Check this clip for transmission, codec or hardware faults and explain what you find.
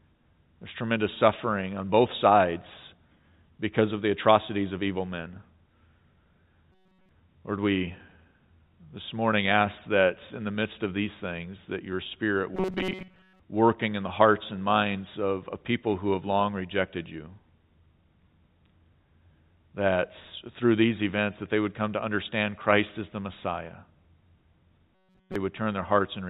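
Three bursts of robotic sound from repeated short buffers, at 6.72–7.09 s, 12.55–13.40 s (ending just before "working in the hearts") and 24.95–25.36 s. A rigid metallic buzz at 188 Hz follows the speech only roughly. This likely comes from replaying about 5.3 ms of audio while late data is skipped. The first and last bursts are fully buzzy, and most of the middle one is.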